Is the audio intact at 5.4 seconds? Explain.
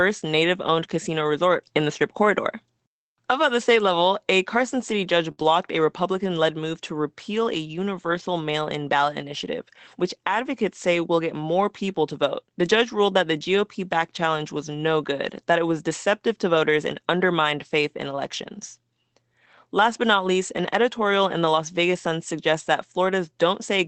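No, not quite. From 5.31 to 5.39 s there's a burst of packet loss. The receiver stretches the last bit of sound it had for about 58 ms, fading it out so it comes across as a held buzz or a dying hiss. Then the audio jumps ahead, with roughly 60 ms of the original simply gone.

Right after that, from 5.39 to 5.45 s, you get a lost packet rebuilt from error correction. There's no gap here. The Opus decoder plays the low-bitrate backup copies carried in the following packets, about 40 ms worth, which fits two lost 20 ms packets. That stretch sounds rougher and noisier than its surroundings, sitting on top of the ordinary Opus coding grain and 8 kHz bandwidth of the call path.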